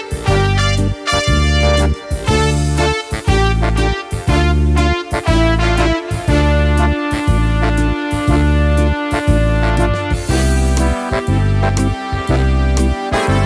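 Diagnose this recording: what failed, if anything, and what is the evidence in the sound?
Nothing failed, and the sound holds no evidence of a fault at any stage of the chain.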